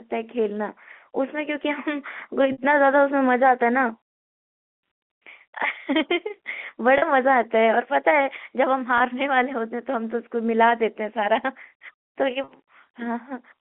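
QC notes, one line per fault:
2.52–2.58 s, 6.98–7.02 s, 8.98–9.00 s, 12.44–12.48 s: packet loss with pitch repetition. Gaps of 60, 40, 20 and 40 ms. The receiver fills each by repeating the last pitch period. The shorter gaps sound like a brief held, buzzy tone; the 60 ms gap fades into silence. The lengths fit lost 20 ms packets.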